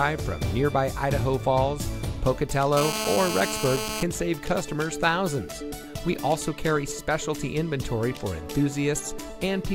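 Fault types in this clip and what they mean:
GSM phone buzz: a nearby 2G phone's radio bursts, rectified by the audio circuit, give a raspy, harmonic-rich buzz at 217 Hz, steady from 2.77 to 4.03 s and about 4 dB below the sound. Mains hum, by contrast, is a smoother 50 or 60 Hz tone.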